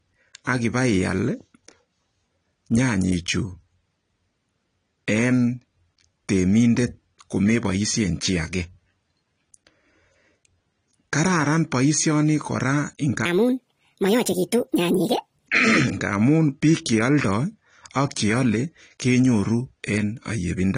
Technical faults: AAC compression; section at the wrong speed

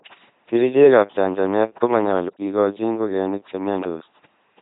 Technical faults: LPC-10 vocoder; block of digital silence

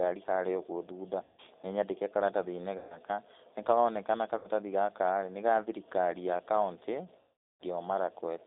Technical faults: G.729 codec; VoIP packet loss concealed by the speech codec

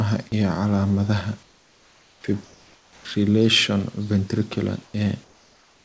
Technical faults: comfort noise in place of the background; onset clipped by the voice detector

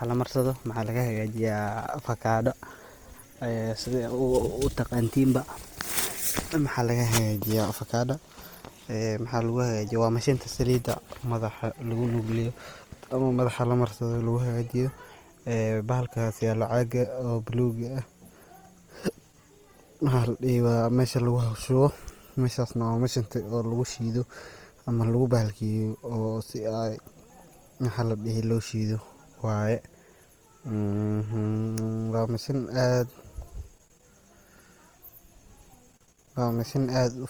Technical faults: Opus compression; Wi-Fi interference

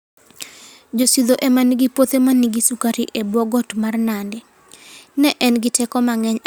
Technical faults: none

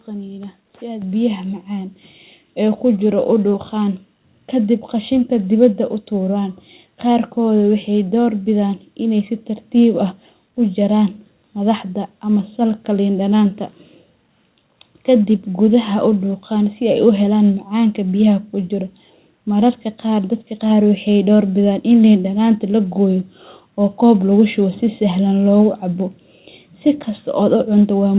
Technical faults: microphone volume stepped up

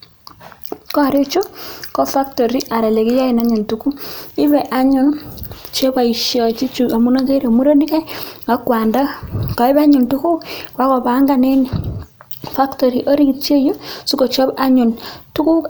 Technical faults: none

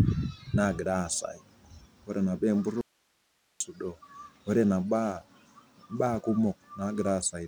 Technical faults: audio dropout to a faint residue

